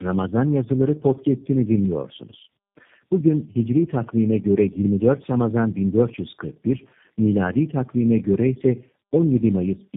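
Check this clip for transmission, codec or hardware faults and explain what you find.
One codec fault runs through the whole clip: tandem speech coding. The speech passed through three low-rate speech coders in a row, which fits a chain like AMR-NB into G.729A. Each coder re-encoded the previous one's already degraded output. The result is rough, muffled, warbly speech. On a spectrogram, nothing appears above 3.7 kHz, and harmonics and formants look smeared and blotchy.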